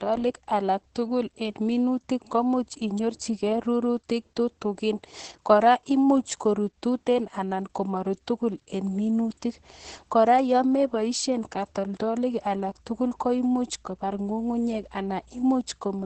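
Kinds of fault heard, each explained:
Opus voice compression: throughout, a linear-prediction coder removes everything above 8.5 kHz and coarsens the excitation, so the speech sounds muffled and hoarse, which fits roughly 10 kbps.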